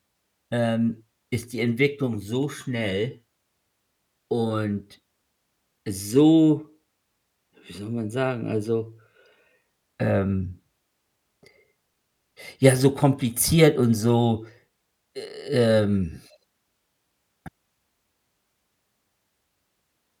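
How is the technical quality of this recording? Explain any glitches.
The technical quality of this recording is sound, and there are no glitches to explain.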